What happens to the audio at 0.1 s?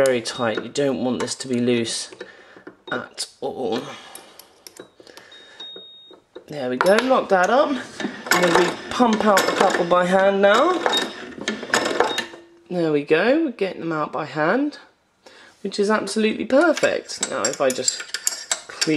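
Nothing goes wrong at 0.1 s; the audio plays through that moment intact, with no dropout, click, glitch or distortion.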